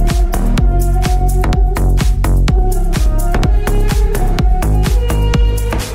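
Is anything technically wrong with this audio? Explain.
No, nothing technically wrong can be heard in this audio, and the signal stays intact and steady throughout.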